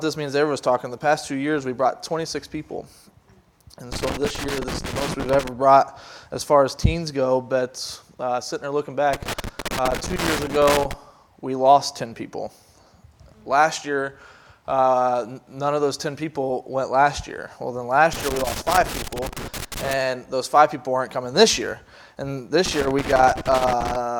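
Four bursts of loose connector crackle chop up the audio, at 3.92–5.48 s, 9.13–10.93 s, 18.13–19.93 s and 22.66–23.96 s, likely a worn or dirty contact making and breaking.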